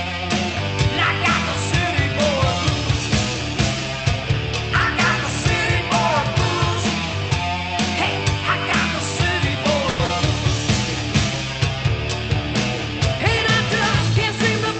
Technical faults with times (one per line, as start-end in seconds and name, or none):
9.89-10.01 call audio freeze
10.05-10.11 short concealed packet loss